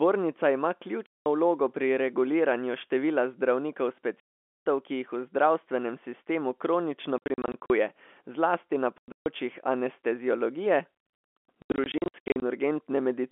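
Packets went missing in transit on this speech recording, and the receiver filled each gap with silence, so packet loss filled with silence cuts hard-edged holes in the signal. Solid dropouts run from 1.06 to 1.26 s, just before "vlogo pri reguliranju števila", and from 4.2 to 4.66 s, after "pri reguliranju števila zdravnikov". Scattered bursts of short gaps follow from 7.18 to 7.7 s after "sistemu kronično", 8.98 to 9.26 s (one 140 ms hole) and 11.62 to 12.42 s. The hole lengths fit 20 ms packets, and the audio keeps the narrow telephone band of its G.711 coding.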